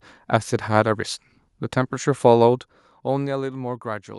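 No technical faults are audible.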